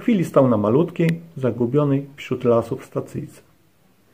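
An electrical switching spike lands at 1.09 s, a sharp snap lasting only a couple of milliseconds and peaking at around -10 dBFS. It sits on top of the audio rather than replacing it, so the material underneath carries on unbroken. The likely cause is a nearby switch, relay or static discharge arcing briefly, with the audio line or input picking up that burst of electrical interference.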